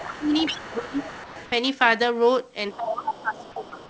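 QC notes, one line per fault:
0.0–1.5 s, 2.72–2.76 s and 2.97–3.89 s, other side's voice leaking through: the echo canceller likely failed to remove the far end's loudspeaker playback from the microphone, so a second voice rides under the talker. It sits roughly 15 dB below the main speech in the first and last stretches, giving a faint, overlapping layer. The short burst at 2.72–2.76 s is much fainter, around 25 dB down, a brief scrap rather than a sustained voice.
0.18–0.32 s, 0.52–1.0 s and 2.76–3.74 s, speech suppressed in double talk: with both sides talking at once, the echo canceller likely could not tell the talker from the echo and turned everything down. The talker's level dips audibly: by roughly 10 dB in the first spot, about 20 dB in the second, and around 15 dB across the long third stretch, which lasts about a second.
1.24–1.36 s, comfort noise in place of the background: the sender likely stopped transmitting during a pause, and the receiver filled the 120 ms gap with synthetic noise. 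The real background, sitting about 19 dB below the loud passages, is swapped for a smooth, featureless hiss about 2 dB quieter. The result is a brief patch where the room's texture flattens and drops slightly before live audio returns. The call codec's band limit, with nothing above 8 kHz, applies to this patch as well as the rest.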